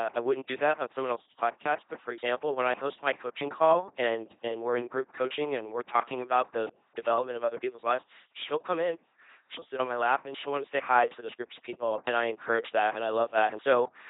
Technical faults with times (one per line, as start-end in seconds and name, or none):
0.00-14.10 LPC-10 vocoder